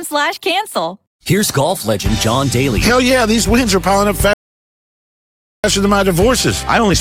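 A rebuffering stall interrupts the audio at 4.33 s: playback drops to silence until 5.64 s, then continues exactly where it left off, adding about 1.3 s while losing nothing. The player ran dry waiting for data, leaving a flat, empty gap across the waveform and spectrogram.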